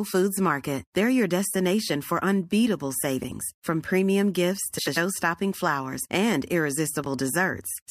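Speech with frames out of order at 3.23–3.32, 4.78–4.98 and 7.04–7.06 s. Adjacent frame runs play swapped. Each stretch flutters.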